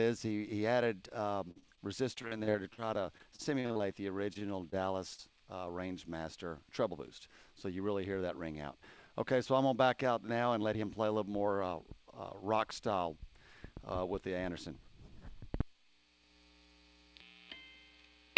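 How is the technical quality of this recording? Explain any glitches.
The recording has clear network glitches. It has been through a call path, and nothing above 8 kHz is present, which fits a wideband codec such as G.722.

Repeated packet loss (robotic sound) runs from 1.48 to 5.20 s. Packets kept going missing. The receiver filled each hole by stretching the last sound. Over twenty gaps occur, the longest 47 ms. About 15% of the stretch is patched. The sound turns choppy and robotic.

Jitter buffer speed-up occurs twice, from 6.89 to 7.80 s at 108% speed and from 10.66 to 11.04 s at 107%. Too much audio had built up in the buffer. The receiver trimmed short pitch-period pieces, about 70 ms and 40 ms in total. The pitch stays the same, but these stretches sound hurried.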